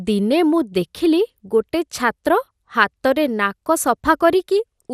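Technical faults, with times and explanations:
Throughout: MP2 compression. The speech has a dull top end with nothing above 14.9 kHz, and a gurgling, granular texture that stays plainly audible across the clip. This likely comes from MPEG Layer II coding at a low rate, which fits roughly 80 kbps. The encoder divides the spectrum into 32 sub-bands and shares out too few bits, so upper bands are dropped and the remaining ones are quantised coarsely, leaving that grainy, bubbling distortion.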